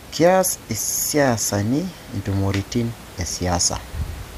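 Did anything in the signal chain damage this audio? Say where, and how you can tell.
No, the signal chain left this speech recording intact, with only the room's own background noise sitting about 19 dB below the speech as part of the acoustic capture.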